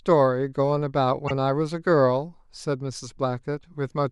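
At 1.27 to 1.31 s there are repeated frames. A 26.1 ms slice of the speech plays twice in a row, which points to a single compressed frame being decoded again. It sounds like a brief stutter, and it stretches the audio by 26.1 ms.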